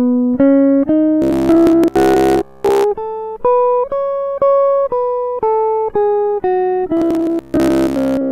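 Music clip in which new audio likely arrived too seldom, so short buffers repeated in place of most of the real signal, giving robotic sound from repeated short buffers from 1.22 to 2.84 s and from 6.97 s to the end: a rigid 66.7 Hz metallic buzz, from a repeat about every 15 ms.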